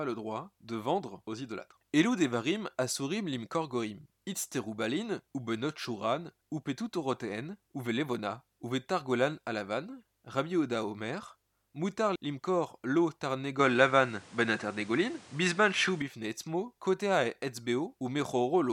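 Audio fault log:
13.59–16.02 s, input switched to a poorer device: the speech abruptly narrows, with nothing above 10.9 kHz, a level shift of a few dB and a new noise floor around 30 dB down, with no gap at either switch, likely from the input changing devices. On a spectrogram the top band cuts off flat; the waveform steps in height.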